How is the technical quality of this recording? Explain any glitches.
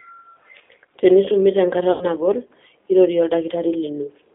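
The recording has two clear technical problems: narrow, roughened telephone-codec sound throughout, and one concealed dropout near the two-second mark.

G.729 codec, throughout: The speech is confined to a thin telephone band of roughly 300 Hz to 3.6 kHz, with a plainly audible grainy, slightly synthetic edge. This low-bitrate codec does not transmit the waveform. It rebuilds each 10 ms frame from a vocal-tract filter, a pitch predictor and a few pulses, so fine detail is lost. The roughness fits an 8 kbit/s G.729A stream.

VoIP packet loss concealed by the speech codec, 1.92 to 2.08 s: The sound briefly turns into a smeared continuation that fades, and it stays weak or distorted for a moment after normal audio resumes. About 90 ms of audio went missing, which fits three lost packets. The decoder covered the gap by repeating its last pitch and filter settings at falling gain. Each frame depends on the previous one, so recovery lags after the loss ends.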